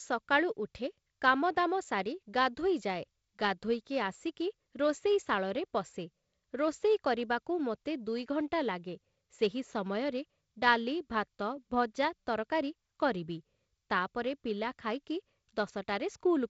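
Speech carried over G.722 wideband telephone coding at 48 kbit/s, with nothing above 7.7 kHz and only the light coding noise that split-band ADPCM at this reduced rate leaves behind, shows no technical faults.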